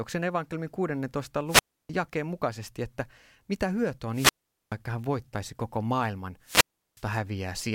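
The radio link of an analogue FM microphone keeps fading until the receiver's squelch mutes it, a wireless microphone squelch dropout in this speech clip. Each time, hiss swells and a hole of near silence follows: 1.47–1.90 s (about 0.30 s muted) before "mukaisesti että mitä hyötyä", 4.12–4.75 s (0.43 s) before "hän voittaisi koko maailman", and 6.42–7.04 s (0.36 s).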